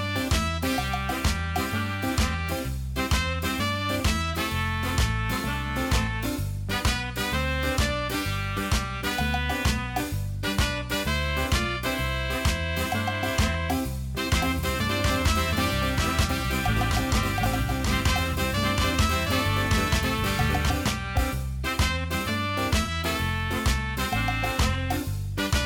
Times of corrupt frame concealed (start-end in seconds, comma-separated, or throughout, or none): 4.33-4.36, 22.83-22.90